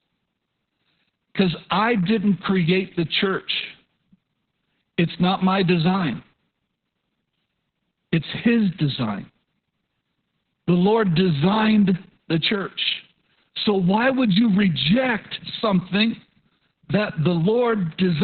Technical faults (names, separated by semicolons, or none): Opus voice compression